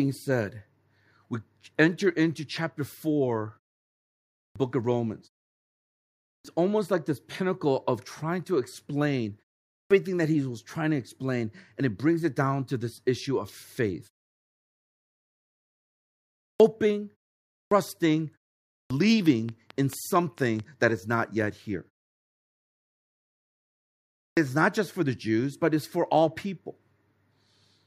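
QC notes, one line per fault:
4.37, 6.29, 9.75, 16.43, 17.54, 18.73 and 24.2 s, clipped start after a pause: after each gap the output wakes late, chopping 155 to 185 ms off onsets, e.g. before "almost like this pinnacle" and "that he was trying".
19.04 to 20.61 s, train of clicks: around seven evenly spaced pops at about 4.5 per second, roughly 5 dB over the signal, ending before "that is not yet", likely interference pulses.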